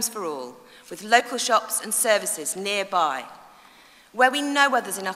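Damaged data in a compressed stream produces a brief garbled blip from 1.19 to 1.21 s in this audio. Corrupted bytes at that point mean the decoder misreads the frames, loses sync, and has to search for the next valid frame header before normal playback resumes.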